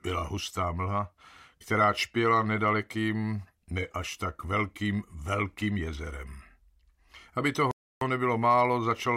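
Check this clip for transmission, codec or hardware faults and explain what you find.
One transmission fault is present. A Bluetooth stall runs from 7.71 to 8.01 s. Interference likely delayed wireless packets, so the headphones' buffer emptied and playback halted until retransmitted data arrived. The sound drops to about 0.3 s of complete silence, then resumes.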